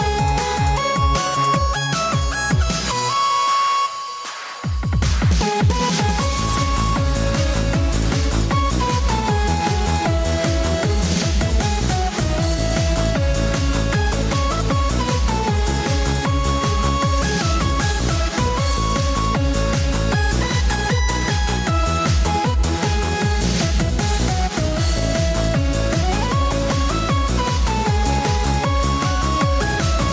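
No technical faults are audible.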